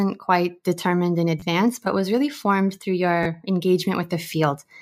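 At 1.40–1.42 s and 3.23–3.25 s, fresh audio arrived late and the device replayed its last buffer two extra times, a repeated buffer. Each 11 ms slice, which fits a 512-sample buffer, loops into a brief buzzy click, and about 20 ms of speech drops out.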